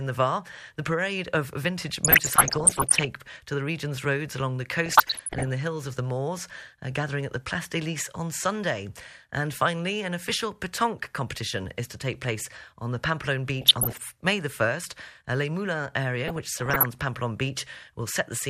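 Weak DAB reception let bit errors slip past error correction into the MP2 data. The resulting DAB burbling makes single sub-bands jump erratically, giving short noise blips over the speech at 2.04–3.05 s, 4.86–5.54 s, 13.61–13.98 s and 16.28–16.86 s.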